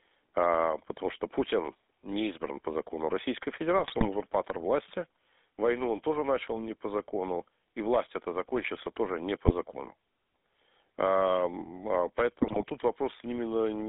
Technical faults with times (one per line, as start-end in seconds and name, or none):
0.00-13.89 GSM full-rate codec
3.76-4.06 GSM bit errors
9.46-9.52 GSM bit errors
12.41-12.64 GSM bit errors